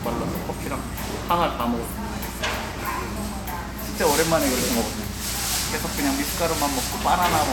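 No technical faults detected.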